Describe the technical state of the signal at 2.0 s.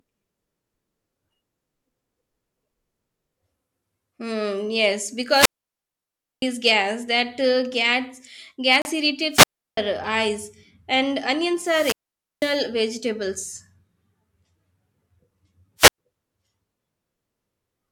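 At 2.0 s the speech signal is intact, with no audible technical fault at that point.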